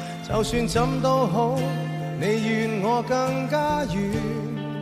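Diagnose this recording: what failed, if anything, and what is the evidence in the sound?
Nothing failed; no faults heard.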